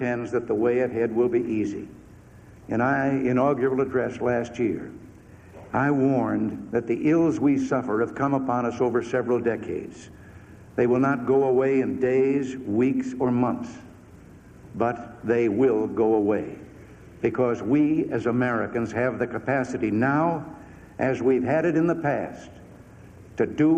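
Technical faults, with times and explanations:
No technical faults can be heard.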